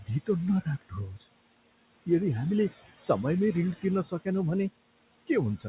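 Noise suppressor artifacts run through the whole speech clip. The suppressor pulls the steady room noise down by about 21 dB, frame by frame. The residue sinks in the pauses and swells under the speech.

Speech cut by the noise suppressor occurs four times. The suppressor mistakes quiet speech for noise and lowers it with the background. The drops are at 0.00 to 0.09 s (about 15 dB), 0.62 to 0.94 s (about 19 dB), 1.11 to 1.25 s (about 15 dB) and 4.05 to 4.27 s (about 11 dB). Each affects roughly a tenth of a second. Those moments sound swallowed and faint.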